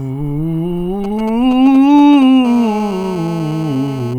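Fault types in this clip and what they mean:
GSM signalling bursts: A nearby 2G phone exchanging control traffic with its network emits short clusters of radio pulses, which the audio circuitry rectifies into sound. From 1.04 to 2.24 s the music carries a galloping dit-dit-dit of brief 217 Hz buzzes, roughly 15 dB below the music. A spectrogram shows short, broken columns of evenly spaced harmonics in irregular groups. The waveform shows clumps of sharp pulses separated by quiet gaps.
GSM phone buzz: Once the phone is in a call, it transmits continuously in bursts about 217 times a second, and rectification turns that pulse train into a hard, raspy buzz unrelated to the music. It runs steadily from 2.45 to 4.14 s at about 16 dB below the music. On a spectrogram it forms unbroken horizontal lines at 217 Hz and its many harmonics, reaching well into the kHz range. The waveform shows a regular spike roughly every 4.6 ms.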